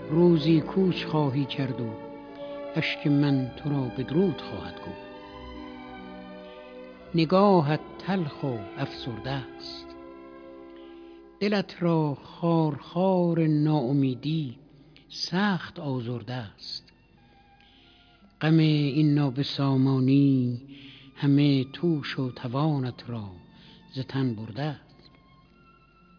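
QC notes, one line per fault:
Nothing stood out on listening to this audio.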